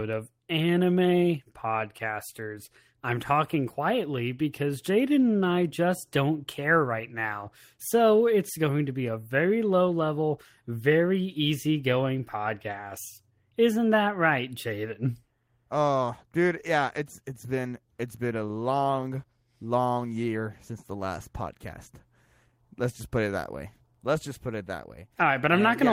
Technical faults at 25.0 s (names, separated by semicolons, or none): none